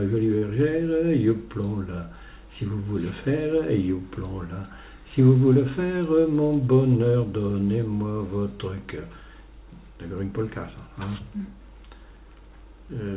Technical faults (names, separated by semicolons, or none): short stall from a late packet